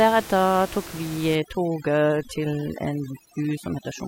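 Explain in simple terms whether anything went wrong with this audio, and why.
Yes, something went wrong. From 1.35 s to the end, overdone noise removal kicks in: a noise reducer set too hard strips out quiet parts of the speech, leaving twinkly specks behind it. The room noise underneath is just normal background.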